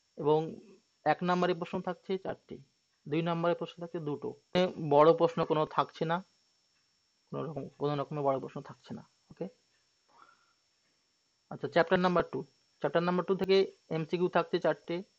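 At 13.44 s the sound jumps forward with no gap. The most likely explanation is a dropped buffer (overrun): the capturing program fell behind, the hardware overwrote samples that had not yet been read, and the material on either side was spliced together directly. Roughly 20 ms appears to be missing, so the discontinuity registers as a small skip.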